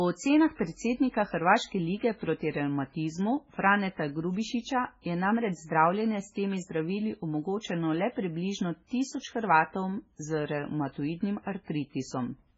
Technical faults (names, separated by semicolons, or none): MP3 compression; pre-echo